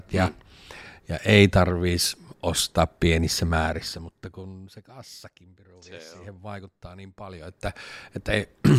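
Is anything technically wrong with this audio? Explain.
No, nothing in this speech audio points to a technical fault.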